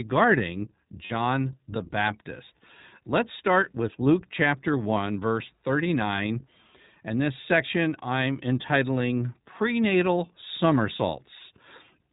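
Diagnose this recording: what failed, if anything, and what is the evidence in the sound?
The codec stage is at fault: the speech has passed through the iLBC codec, and the damage is plainly audible throughout. Above 4 kHz a spectrogram is empty, with a sharp ceiling where the narrowband coder discards the upper band. Below it the voiced harmonics look slightly smeared and the sound is rough and synthetic, because each short frame's excitation is coded on its own. The texture fits iLBC at 15.2 kbps with 20 ms frames.

The network stage shows lost iLBC frames from 1.06 to 1.13 s, a gap of about 40 ms, which fits two missing 20 ms frames. The decoder fills the hole by repeating the last pitch cycle mixed with noise, so the sound briefly becomes a held, faintly buzzy vowel. On a spectrogram the harmonics run flat and unchanging across the gap, with a noisier floor between them. The waveform shows near-identical repeated cycles. 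Because iLBC frames are coded independently, the sound is normal again almost immediately afterwards.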